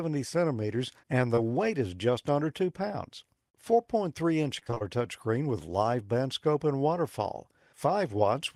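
At 1.35 to 1.39 s, between "centimeters and the" and "weight is just under", there is a brief smear where the sound blurs for a moment instead of moving cleanly on. This is short concealed packet loss: about 20 ms of audio arrived too late or not at all, and the receiver covered the hole by extending the preceding sound before blending back into the real signal.

From 4.59 to 4.82 s, just before "touchscreen with live band", the audio turns choppy, stuttering in quick fragments with bits missing. This is repeated packet loss, heard as robotic sound. The breakup points to around six separate losses, the longest about 24 ms, totalling roughly 0.12 s. Concealment stitched each hole by continuing the last sound, filling about half of the stretch with synthesised audio.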